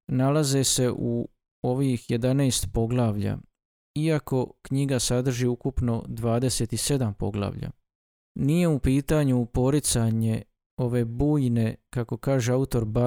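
No technical faults can be heard anywhere in this speech recording; the signal stays steady and intact throughout.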